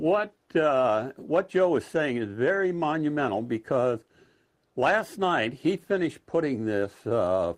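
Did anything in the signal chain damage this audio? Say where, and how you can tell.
No, nothing in the chain audibly damaged this audio; there is no stage I can point to and no event to time.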